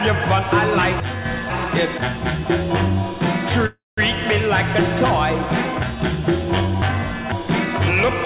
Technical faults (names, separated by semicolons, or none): chunks out of order; one channel drops out; call audio freeze